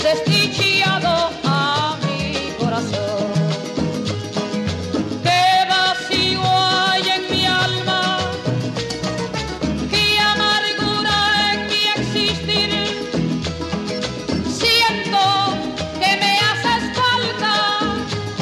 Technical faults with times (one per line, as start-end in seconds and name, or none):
none